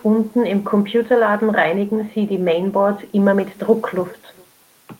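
From start to finish, an echo with no canceller: the far end's loudspeaker feeds its microphone unchecked, returning the speech around 400 ms later as a faint, thinner copy about 28 dB down.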